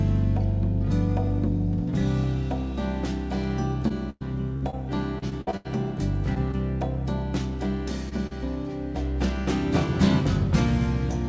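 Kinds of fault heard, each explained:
Repeated packet loss (robotic sound): packets kept dropping, each hole patched by stretching the last sound, so 3.88–4.75 s and 5.19–5.67 s come out choppy and robotic.
Short concealed packet loss: brief 20–40 ms holes filled by continuing the preceding sound, heard as quick smears or wobbles at 6.35–6.38, 8.09–8.13 and 8.27–8.33 s.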